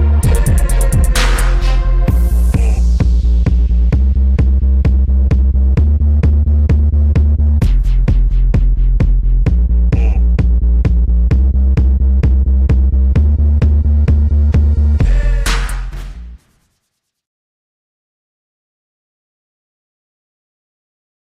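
A harsh, buzzy fuzz sits on every loud moment across all 21 seconds of the audio, with the peaks sounding flattened and gritty rather than open. This is hard clipping. The signal is driven about 10 dB beyond what a stage in the chain can pass, so its peaks are sliced flat, and roughly a sixth of the waveform ends up pinned at the ceiling. Those squared-off tops generate high harmonics that the original sound never contained.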